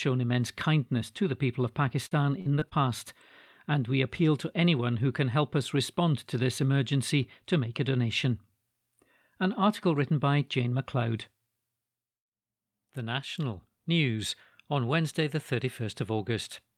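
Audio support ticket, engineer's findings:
Repeated packet loss (robotic sound), 2.07–2.73 s: packets lost or arriving late on the network path. Four gaps, longest 44 ms, 120 ms total, concealed by extending the preceding sound over 18% of the span. Result: choppy speech with short pieces missing.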